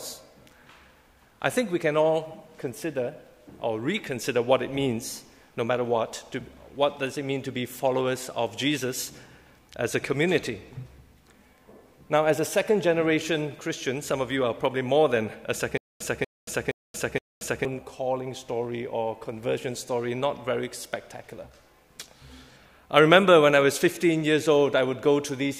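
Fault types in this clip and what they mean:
Stutter with silent gaps: from 15.78 to 17.65 s, one fragment about 240 ms long is heard four times, each followed by about 229 ms of dead digital silence, so the burst returns every 469 ms at a steady pace. The likely cause is a stalled player or stream re-sending its last fragment on each retry. Unlike a seamless loop or a plain dropout, it pairs exact repetition with true silence, and the intervening audio never arrives.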